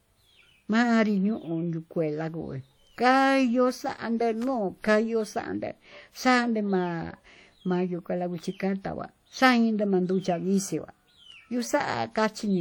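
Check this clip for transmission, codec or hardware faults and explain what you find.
Two faults turn up in this speech clip: a codec problem across the whole recording and one brief electrical disturbance.

WMA compression, throughout: The likely cause is a transform codec coarsely quantising the signal, which fits a WMA encode at around 48 kbps. Its error smears across long blocks and weak components drop out, so the speech sounds plainly ringing and washy, with hiss that breathes with the signal.

Electrical switching spike, 4.42 to 4.44 s: A nearby switch, motor or static discharge likely arced and the audio line picked it up. This puts a sharp snap or a tight cluster of clicks on top of the speech for about 20 ms.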